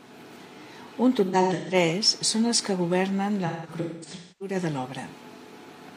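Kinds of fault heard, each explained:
AAC frame loss with concealment: missing AAC frames are rebuilt from the last good spectrum with scrambled phase, so from 1.25 to 1.74 s and 3.46 to 4.55 s the speech turns smeared and noisy, not cut to the clean silence of a hard dropout.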